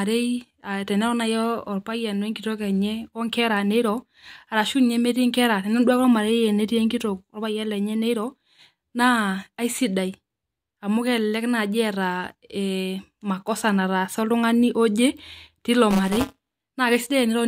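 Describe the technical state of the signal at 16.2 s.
At 16.2 s the speech carries buffer tearing, running from 15.90 to 16.71 s. Writer and reader have slipped and cross inside each period. About a tenth of each buffer replays audio roughly 20 ms old. The hard joins produce a robotic 188 Hz buzz, which fits a 256-sample buffer.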